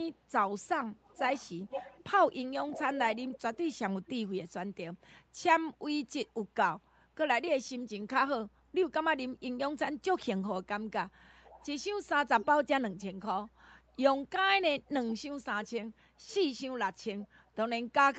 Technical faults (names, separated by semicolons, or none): echo leak